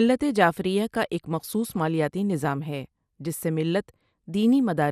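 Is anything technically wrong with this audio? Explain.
Yes. Throughout this speech, the sound is dull with a gurgling, granular edge, likely from MP2 compression at a rate consistent with about 80 kbps. A spectrogram would show the upper bands switching on and off in blocks.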